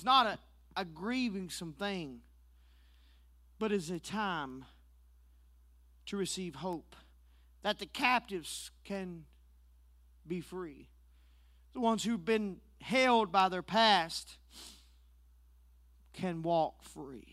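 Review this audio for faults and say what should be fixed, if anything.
Word clock ticks run through the speech from 0.61 s to 17.30 s: sharp clicks at a steady rate of about two per second, some louder than others, around thirty in all. They come from a digital link read by a receiver on its own free-running clock, not locked to the source. With the two clocks differing by something like 40 parts per million, they drift past each other every half second or so. At each crossing the receiver misreads a few samples and drops or repeats a single one, leaving a tick. To prevent it, lock the receiving device to the incoming digital signal or to a shared master word clock, or use a sample-rate converter at the input.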